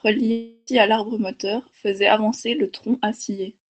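A speech recording with a long network dropout from 0.31 to 0.69 s. For about 0.36 s the real audio stops. The receiver fills the gap by stretching the last sound into a smeared, buzzy tone, and the stretch never falls to silence. When normal sound resumes, that part is missing, not delayed. The likely cause is a run of lost packets on a call link. The band-limited, coded tone of the rest fits that path.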